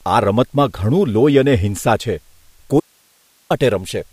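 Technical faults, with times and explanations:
2.80 to 3.50 s, audio dropout to a faint residue: the speech cuts out abruptly for about 0.7 s and comes straight back mid-flow. The gap isn't silent. A steady hiss remains, roughly 40 dB below the speech level. That residue suggests the stage after the break stayed live and kept passing its own noise floor while the wanted signal was missing, likely from a momentary loss on the input side. The hard edges make it sound like a fault rather than a natural pause or a fade.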